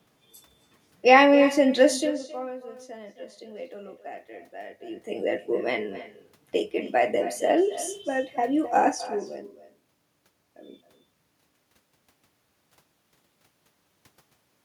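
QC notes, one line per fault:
Throughout: echo with no canceller. The far end's loudspeaker feeds its microphone and nothing subtracts it, so the speech returns after a round trip of roughly a third of a second, about 16 dB down, as a thinner shadow trailing each phrase.
1.96–2.30 s, 4.69–5.21 s, 8.88–9.22 s: zipper noise. Gain moves in unsmoothed 1 dB steps, roughly 50 per second in the first run and around 30 per second after. Each step clicks, producing a rapid ticking over level shifts of roughly 20 dB down, 20 dB up, then 10 dB down.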